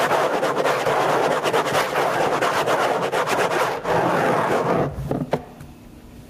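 Gain pumping runs through the whole clip: the gain ducks by about 20 dB as each loud sound hits. That's likely input gain set far too high with a fast limiter clamping down, so everything sounds squashed and flattened in level.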